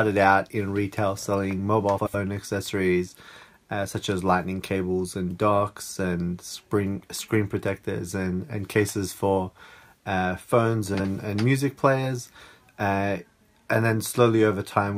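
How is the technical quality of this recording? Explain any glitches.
The recording has two audible glitches of one kind, frames out of order. From 1.98 to 2.15 s and again from 10.94 to 11.05 s, two adjacent blocks of about 78 ms and 52 ms swap places, consistent with runs of three and two frames. The sound is briefly scrambled, a garbled flutter. Nothing is lost in time.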